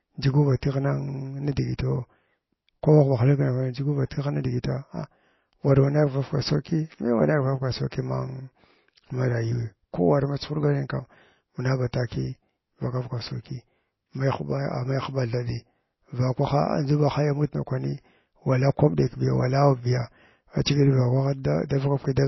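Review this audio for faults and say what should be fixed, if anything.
Throughout the clip the speech has plainly audible codec damage, and nothing is present above 5.8 kHz. This is likely MP3 compression at a very low bitrate, which fits about 24 kbps. At that rate the encoder runs short of bits, zeroes weak frequency lines that then switch on and off between frames, and cuts the treble at a fixed point. The result is a watery, swirly texture with smeared attacks and the hard ceiling at 5.8 kHz. To prevent it, keep the recording uncompressed or encode it at a much higher bitrate.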